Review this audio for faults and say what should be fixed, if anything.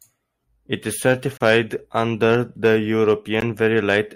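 The speech breaks twice with a gap between stream segments. A hard-edged silence runs from 1.37 to 1.41 s, about 32 ms, just before "under the". A 16 ms hole follows at 3.41 s. The spacing suggests 2-second segments whose time stamps don't meet, so the player fills the space with silence. Nothing is lost. Align each segment's start time exactly with the previous segment's end.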